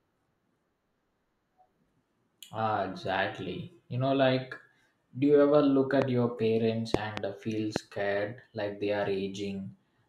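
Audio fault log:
6.02–7.78 s, loud pop: There are three separate hits. The first is a single sharp pop at 6.02–6.04 s, right after "do you ever look" and before "your parents". A double pop follows at 6.94–7.20 s, between "your parents" and "uh feel". A last single pop lands at 7.76–7.78 s, just after "uh feel". Each one jumps roughly 15 to 20 dB above the speech, which keeps going underneath. The likely cause is a voltage spike from a plug, switch or static discharge that the downstream circuitry turned into a brief thump.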